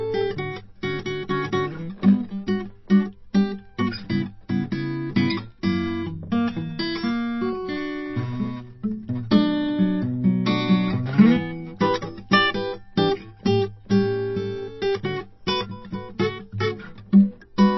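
All the way through, the music has nothing above about 5.8 kHz and a plainly audible watery, swirly texture, with thin treble content flickering in and out. That's likely MP3 compression, starved of bits in a way that fits a very low bitrate around 24 kbps.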